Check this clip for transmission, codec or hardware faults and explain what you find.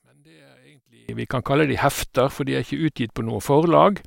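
There's one fault, right at the top. From 0.0 to about 1.09 s the speech drops about 27 dB and comes through faint, with the centred voice largely gone. That's likely one channel inverted: with one side's polarity flipped, everything common to both channels cancels when they're summed to mono, so only the small difference between them survives. After 1.09 s the level comes back to full.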